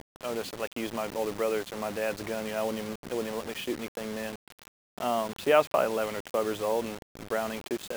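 Throughout the clip quiet sounds turn gritty, with distortion that tracks the level. This is low bit depth without dither, likely a rounding to about 6 bits, leaving the error only some 15 dB below the signal.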